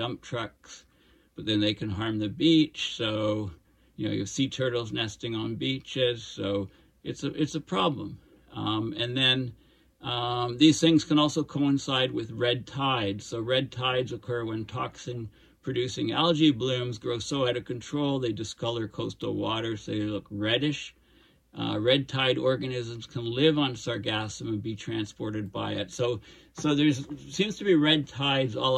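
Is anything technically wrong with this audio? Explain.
No, no technical faults found.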